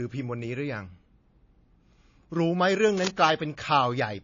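From the very start the speech has the smeared, layered sound of transcoding between lossy codecs. Nothing comes through above about 7.2 kHz, so it's dull and boxed-in. The artefacts don't sit like one codec's. There are two different sets of artefacts heard together, which fits a likely low-bitrate MP3 (around 32 kbit/s) being re-encoded to AAC at a similar rate. The second encoder wastes its bits on the first one's debris.

Then at 2.91 to 3.10 s there's a short burst of cable scratch noise, a dense, ragged scratching that sits only a little below the speech itself, so it's hard to miss. That's the sound of contact resistance jumping around rapidly, likely a worn cable, connector or control being moved. It rustles over the speech for just under a fifth of a second, then stops.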